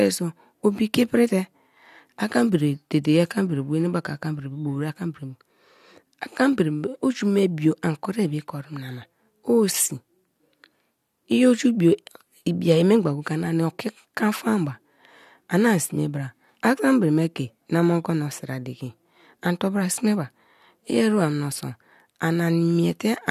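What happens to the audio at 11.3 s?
Nothing goes wrong at 11.3 s; the speech carries on intact through that moment, with no dropout, click or distortion to be heard.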